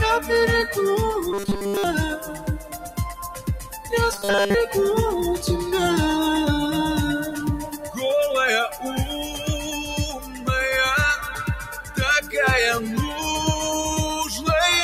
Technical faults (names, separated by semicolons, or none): noise suppressor applied to music or sounds; robotic sound from repeated short buffers; sound cut by the noise suppressor